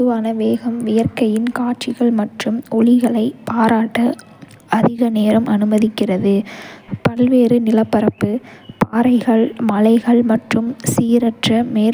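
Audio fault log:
Throughout: crude rate conversion. A faint gritty fizz rides on the speech, about 35 dB below it, strongest on loud and bright sounds. Samples were linearly interpolated without filtering, which fits a 32 kHz to 44.1 kHz change, leaving inharmonic tones.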